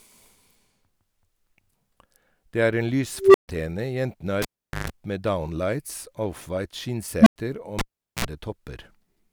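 Speech with two kinds of fault. An unstable filter at 3.19–3.48 s and 7.21–7.36 s makes a tone near 400 Hz, then near 200 Hz, swell over 156 ms and 56 ms respectively. On a spectrogram it appears as a brightening horizontal line. On the waveform it is a clipped envelope followed by flat silence of 136 ms and 96 ms while the overflowing filter resets. A cable pulled and plugged in at 4.42–4.90 s and 7.79–8.25 s shows as a spike for each pop, a near-empty gap of 426 ms and 409 ms, and a band of buzz with harmonic stripes at 50 Hz and then 60 Hz, lasting 141 ms and 54 ms, as only the tip touched.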